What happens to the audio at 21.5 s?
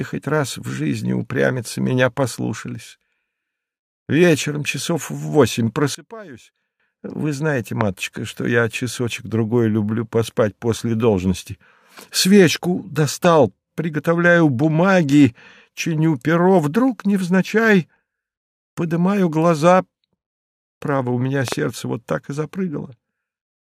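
At 21.48 to 21.54 s there is a loud pop, heard as two sharp clicks in quick succession standing roughly 15 dB above the sound, which continues underneath. A brief electrical pulse, likely from a plug, switch or static discharge, entered the signal path.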